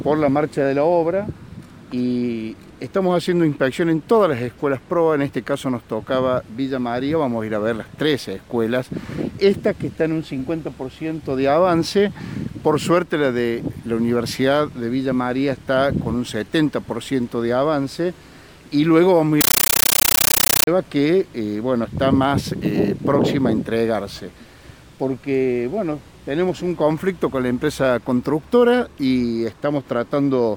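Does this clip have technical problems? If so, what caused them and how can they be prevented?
Yes. From 19.41 to 20.67 s there is a compressed stream played as audio: an encoded Dolby Digital bitstream reached the output without being decoded, and its data was treated as ordinary samples. Each encoded frame plays as a 13.3 ms burst of noise, then silent padding, repeating 31.25 times a second. The result is a harsh, very loud chattering static that replaces the sound, which fits a high-rate AC-3 stream around 640 kbps. To prevent it, set the player to decode to PCM, or only enable bitstream passthrough when the receiving device is confirmed to decode Dolby Digital.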